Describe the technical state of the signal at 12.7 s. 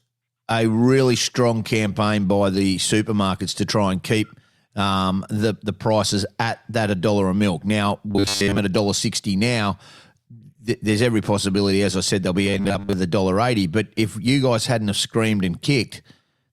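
Audio likely arrived too seldom, so from 12.45 to 12.93 s, between "as I said they'll" and "a dollar eighty", a 10 ms snippet was looped over most of the span. This is robotic sound from repeated short buffers: a rigid, metallic 100 Hz buzz that loosely tracks the speech.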